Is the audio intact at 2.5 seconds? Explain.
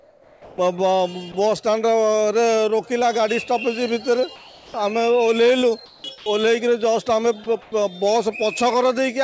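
Yes, the audio is intact at 2.5 seconds, with no dropout, glitch or distortion at that moment.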